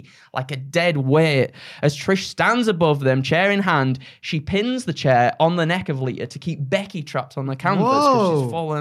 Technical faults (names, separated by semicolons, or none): none